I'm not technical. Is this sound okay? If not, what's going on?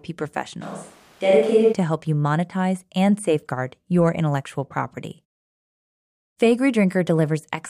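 No. From 0.63 to 1.72 seconds there is a switch to a distant microphone. The voice suddenly sounds roomy and hollow, with less bass, as if spoken from across the room. The loudness stays about the same, and the background stays quiet. At 1.72 seconds the close, full sound returns just as abruptly. The likely cause is that the close microphone dropped out briefly and a farther one, such as a camera's, filled in.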